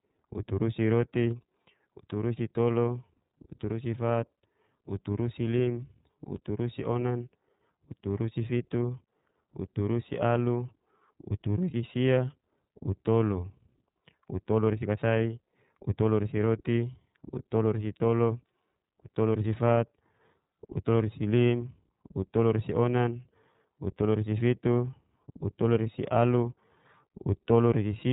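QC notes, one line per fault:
throughout, iLBC codec: the speech is dull and band-limited, with nothing above about 3.8 kHz, and has a plainly audible rough, synthetic edge. Each 30 ms frame's excitation is coded on its own, which points to the 13.33 kbps iLBC mode.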